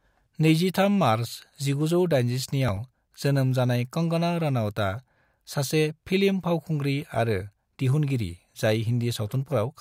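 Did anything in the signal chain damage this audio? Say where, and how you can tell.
Yes. From 2.48 to 3.13 s the speech picks up a gritty processor overload crackle, a driver or buffer problem. Short buffers of roughly 5 ms are missing their deadlines and simply being skipped, about ten of them, each leaving a hard-edged gap that together sounds like tearing.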